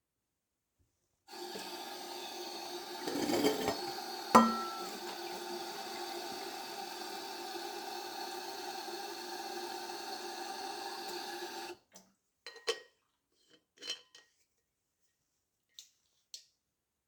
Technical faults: none

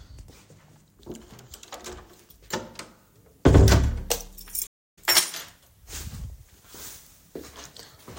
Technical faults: stream reconnect

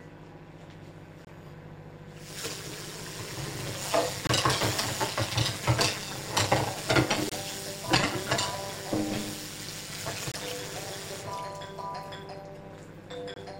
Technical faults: overlap-add ripple; gap between chunks

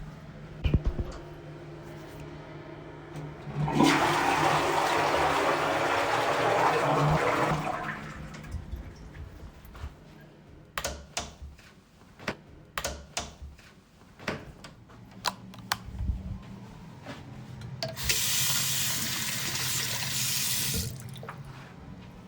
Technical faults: chunks out of order; stream segment repeated

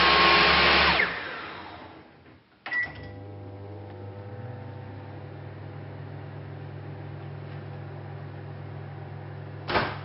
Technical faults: none

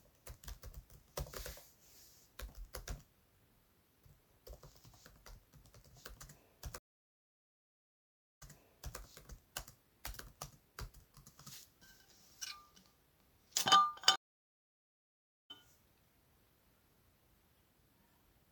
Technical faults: stream reconnect

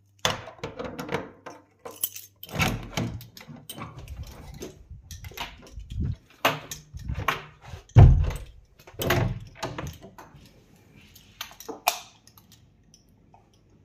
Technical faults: none

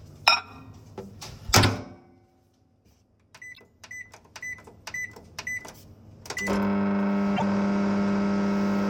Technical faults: repeated frames

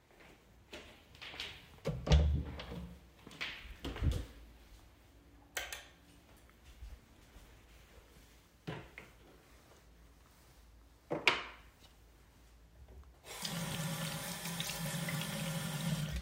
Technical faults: chunks out of order

